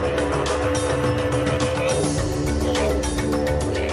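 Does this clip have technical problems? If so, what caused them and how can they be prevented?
No, nothing technical goes wrong anywhere in this clip, so there's nothing here that needs preventing.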